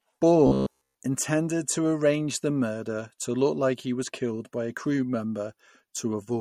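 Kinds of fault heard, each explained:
MP3 compression: Throughout the speech, plainly audible codec damage, most likely from MP3 encoding at a low bitrate, leaves a watery, swirly texture. A spectrogram shows weak high-frequency bins flickering on and off between frames.
robotic sound from repeated short buffers: From 0.47 to 0.96 s the speech turns into a rigid metallic buzz at 66.7 Hz, likely from one 15 ms stretch being replayed as it waits for new audio. The waveform shows the same short cycle repeating for most of that span.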